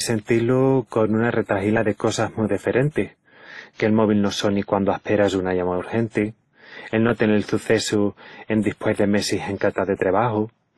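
Speech, likely passed through transcoding between lossy codecs, a low-bitrate WMA encode then Opus, so both codecs' artefacts stack throughout, with nothing above 12.1 kHz.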